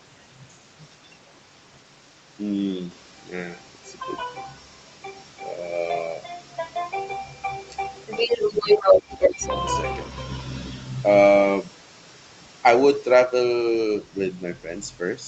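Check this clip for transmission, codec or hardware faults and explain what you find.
Two faults stand out, both from echo cancellation on a speakerphone-style call, against audio that stops at about 8 kHz, consistent with an Opus call path.

Other side's voice leaking through appears at 0.79–1.18 s, 4.6–4.81 s, 8.07–9.01 s, 9.2–9.49 s and 14.05–14.19 s. A second voice sits behind the talker, faint in the early and late scraps (roughly 25 to 35 dB down) but about 5 dB louder than the talker around 8–9.5 s. Loudspeaker pickup that the canceller likely failed to subtract is the cause.

Speech suppressed in double talk occurs at 8.81–9.43 s, overlapping the strongest leak. The talker's level dips by up to about 15 dB in pieces totalling roughly 0.3 s. With both sides active, the canceller likely treated the talker as echo and attenuated everything.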